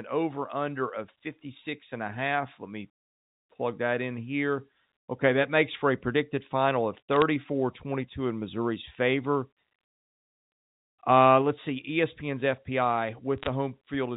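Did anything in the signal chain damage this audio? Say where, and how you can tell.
Yes. The damage happened in transmission on the digital phone line: bit errors struck the G.711 stream, a fraction of a percent of bits, in two short bursts. Each flipped bit corrupts one sample, and hits on high-order bits, or on the sign of a loud sample, produce sharp ticks. This can be heard as a brief crackle from 7.13 to 7.22 s, right after "a predicted final of", and again from 13.38 to 13.47 s. Between the bursts, the telephone-band sound up to 4 kHz is intact.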